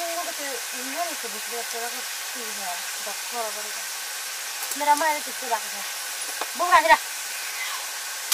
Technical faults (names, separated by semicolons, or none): none